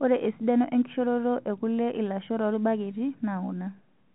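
No technical faults can be heard in this speech recording, which comes through the G.711 telephone path with nothing above 3.9 kHz.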